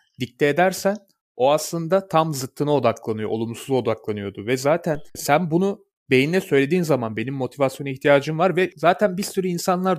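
A DC step occurs at 4.95 s, right after "odaklanıyor olumsuz odaklanıyordu ve" and before "sen bunu beynine söylediğin": the waveform's zero line jumps by about -28 dBFS, then drains away through a roughly 2 Hz high-pass, giving a single low thump while the speech continues unaffected.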